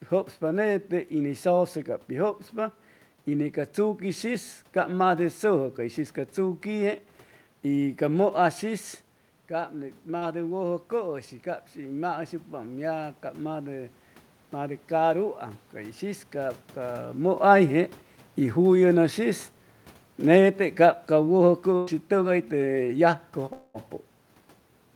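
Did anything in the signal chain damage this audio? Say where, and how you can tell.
Yes. Call processing: automatic gain rising from 9.71 to 17.15 s adds about 6 dB after the input fell about 9 dB, lifting voice and noise together in a slow waveform swell.

Network and codec: a short concealed packet loss at 10.17–10.23 s replaces 40 ms with extrapolated sound, a brief smear showing as a smoothed spectrogram patch.

Network: a burst of packet loss at 21.77–21.89 s drops about 100 ms; concealment holds then fades the last sound, a decaying envelope before audio resumes.

A long network dropout is the likely cause at 23.53–23.76 s: 220 ms missing, filled by fading extrapolation, visible as blurred, decaying spectrogram energy before the audio jumps ahead.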